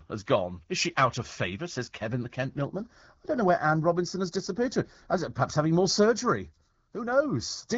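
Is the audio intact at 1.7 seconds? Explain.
Yes, the audio is intact at 1.7 seconds, with the speech carried cleanly through the AMR wideband (HD Voice) path at a rate that fits 12.65 kbit/s.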